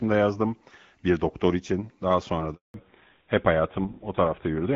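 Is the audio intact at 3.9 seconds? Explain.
No. A fallback to narrowband runs from 2.74 s to the end of the clip, so 3.9 s falls inside it. The call drops from the AMR wideband (HD Voice) codec at 12.65 kbit/s, which sounds clear and only lightly coded before the switch, to GSM full rate at 13 kbit/s, an older narrowband codec. Nothing above 4 kHz survives, so the speech turns muffled and duller, with a rougher texture.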